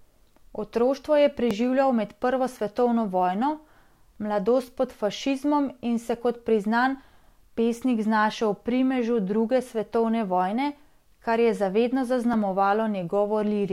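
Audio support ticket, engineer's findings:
Repeated buffer at 1.51 s and 12.33 s: tick, not a stutter. Each time one piece of roughly 1.5 ms plays twice with a hard join, which fits a 64-sample buffer re-sent when the next one was late. Playback device underrun. Essentially no speech lost.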